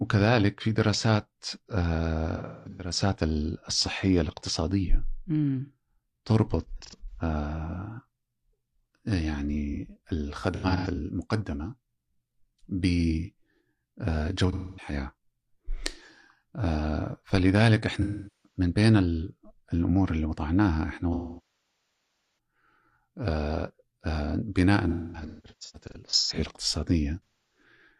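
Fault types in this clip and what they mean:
Channel delay (comb filtering): one channel of the original ran late by about 0.05 ms, which fits a delay of about 2 samples, and the two were folded to mono. Content common to both cancels at evenly spaced frequencies, with the first notch near 10 kHz. A delay this short mainly dulls the top end rather than sounding hollow. It runs from the start to about 7.7 s.
AAC frame loss with concealment: stretches of coded AAC frames went missing, and the decoder filled the gaps from the last good spectrum, fading out when a loss ran on. This happens at 2.36, 6.66, 10.55, 14.52, 18.01, 21.13, 24.88 and 27.25 s. Shorter losses give smeared, noisy or phasey patches. The longest, about 1.3 s from 21.13 to 22.35 s, decays toward a very low noise floor before the sound fades back in.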